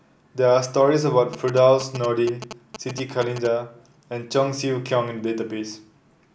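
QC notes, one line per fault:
1.33–3.47 s, GSM signalling bursts: a nearby 2G phone's radio bursts get rectified by the audio circuit, giving galloping ticks and 217 Hz buzzing roughly 10 dB below the speech.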